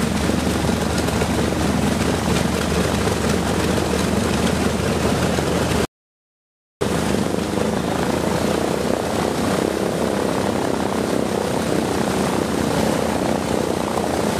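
The audio cuts out abruptly at 5.85 s and returns mid-flow at 6.81 s, leaving almost a second of dead silence with no room tone. This is an audio dropout to silence, likely from lost input while recording continued, so that material is gone.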